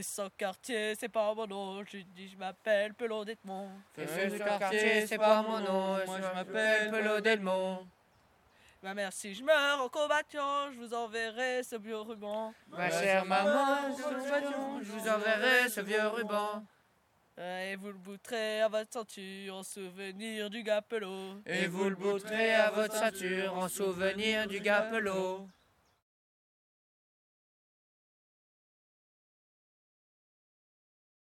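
Nothing stood out as a technical fault on listening.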